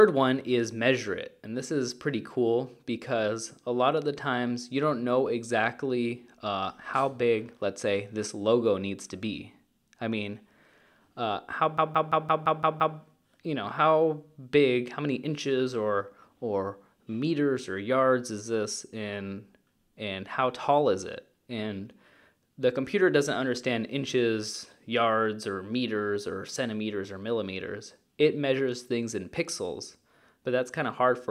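From 11.78 to 12.97 s a system hang loop repeats one 171 ms slice seven times, a 5.9 Hz machine-gun stutter that fits an 8192-sample buffer, visible as identical repeating waveform blocks.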